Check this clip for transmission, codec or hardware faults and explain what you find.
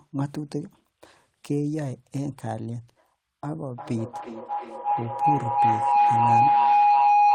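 A feedback howl starts at 3.57 s and runs to the end of the clip. Two devices in the same room appear to be joined to the call, so the microphone picks up the loudspeaker's output and sends it round again, gaining level on each pass. The repeats grow instead of dying away and narrow to a tone around 700 Hz, pulsing roughly every 400 ms and peaking about 9 dB above the speech.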